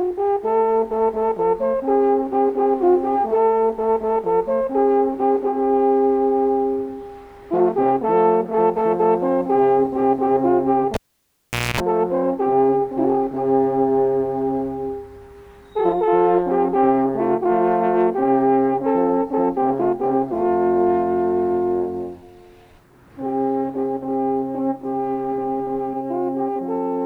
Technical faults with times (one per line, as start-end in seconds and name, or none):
10.94-11.80 cable pulled and plugged in